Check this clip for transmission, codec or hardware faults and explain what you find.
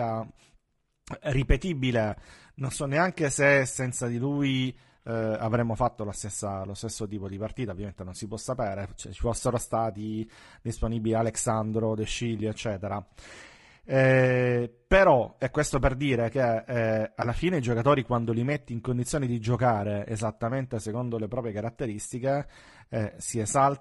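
Two faults are audible in this speech clip.

Throughout, the speech sounds rough and grainy, with noise between harmonics and a thin top band, likely from low-delay AAC compression at a low bitrate, around 32 kbps.

At 10.79 to 10.82 s there is a brief smeared, noisy patch, consistent with AAC frame loss with concealment: about 20 ms was rebuilt from the preceding spectrum, which fits a single lost frame.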